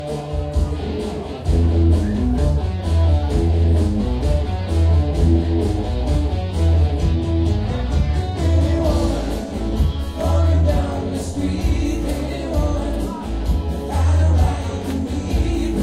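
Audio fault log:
Nothing to log here, as the sounds in this clip come across without any technical trouble to point out.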